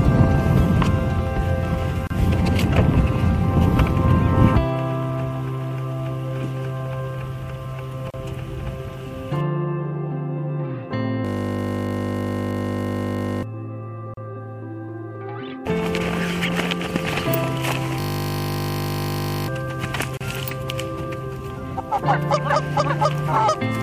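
At 2.07, 8.10, 14.14 and 20.17 s, a gap at a join of encoded pieces cuts in. Separately encoded pieces kept their padding. Each silence lasts about 33 to 34 ms, every 6 s.

From 11.25 to 13.43 s, and again from 18.00 to 19.48 s, a system hang loop repeats one 20 ms buffer. It sounds like a steady 50 Hz buzz. About 2 s and 1.5 s of audio are lost.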